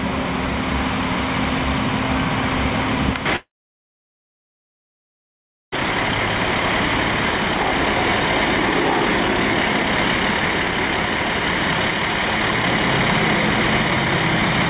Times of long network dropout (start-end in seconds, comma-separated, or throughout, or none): 3.36-5.77